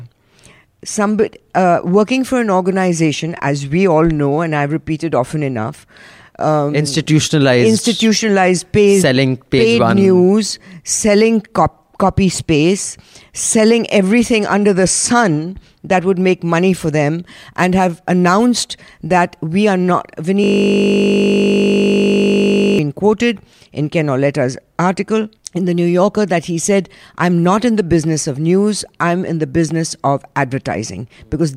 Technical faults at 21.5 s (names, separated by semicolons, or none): system hang loop